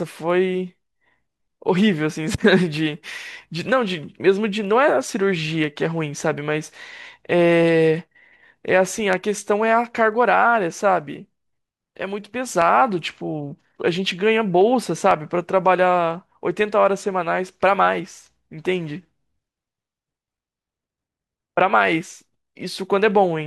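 A speech recording with periodic USB or driver dropouts from 4.6 s to 23.1 s: a tiny slice of audio, about a tenth of a millisecond, is skipped every 0.5 s, giving evenly spaced ticks under the speech. On a spectrogram they appear as regularly spaced thin vertical lines; the waveform shows small discontinuities.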